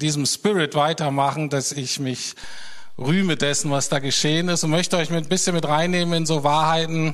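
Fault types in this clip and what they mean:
DC step: the waveform's zero line jumps by about -30 dBFS at 2.44 s and holds to the end. It's a single low thump, seen as a baseline shift and brief low-frequency broadband flash.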